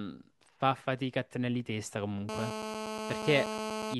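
A speech recording in which, from 2.29 s to 3.94 s, a hard, raspy buzz with a rich stack of harmonics sits about 5 dB below the speech and holds steady throughout. This is GSM phone buzz: a nearby 2G phone on a call transmits bursts about 217 times a second, and the audio circuitry rectifies those radio pulses into a 217 Hz buzz unrelated to the speech.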